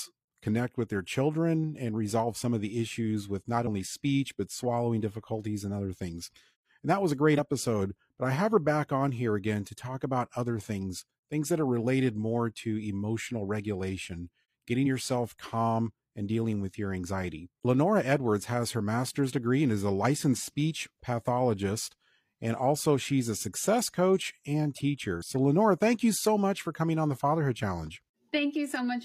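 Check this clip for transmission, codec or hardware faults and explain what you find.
The clip has four short bursts of damaged data in a compressed stream. They fall at 3.63–3.68 s (after "the issues with not", before "speech but swallowing difficulties"), 14.82–14.85 s (after "more to emotional regulation"), 17.60–17.65 s, and 25.17–25.23 s (after "a success coach and"). Corrupted bytes make the decoder misread frames and lose sync until it finds the next valid header. Each 30–60 ms hit sounds like a brief chirp, squawk, click or short hole cutting into the speech.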